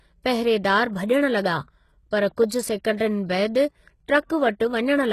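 Throughout the speech, the treble sounds gritty and metallic, and nothing reaches above 12.3 kHz. This is likely HE-AAC compression, in which the top band is rebuilt by copying lower bands upward, and the damage points to a bitrate near 16 kbps. Plain low-pass filtering would sound dull rather than rough.

Pre-echo appears at 2.36 s as a short hiss smeared ahead of an attack, and again from 2.97 to 3.00 s, spreading 27 ms before the onset. Codec noise sized for the loud attack leaks into the quiet moment before it. Unlike a click, it swells into the transient instead of standing apart from it.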